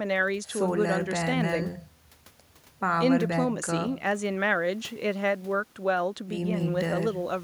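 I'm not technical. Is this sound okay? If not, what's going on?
Yes, this sound is okay, and nothing is going on with it.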